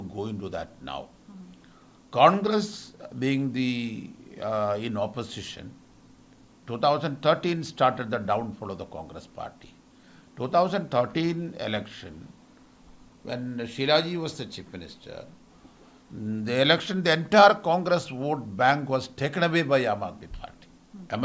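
No technical faults can be heard anywhere in the recording. Nothing interrupts, distorts or degrades the sound at any point.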